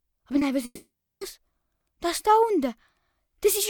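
Two network faults show up early in this audio. At 0.39 to 0.43 s there's a short concealed packet loss: about 20 ms never arrived, and the receiver papered over it by extending the preceding sound, so you get a quick smear or wobble right there. Then from 0.65 to 1.23 s the sound gives way to a fading buzz or hiss and about 380 ms of near-silence before resuming, with the missing stretch simply gone. The likely cause is a long network dropout of roughly 560 ms.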